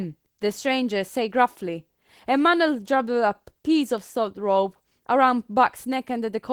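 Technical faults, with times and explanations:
Throughout, Opus voice compression: at a rate around 16 kbps, coarse excitation coding leaves the speech audibly hoarse and slightly robotic, though the band still reaches about 20 kHz.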